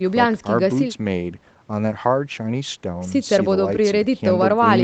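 No faults found: the speech shows only ordinary call microphone processing, with the lowest bass trimmed by its high-pass filter and nothing above 8 kHz.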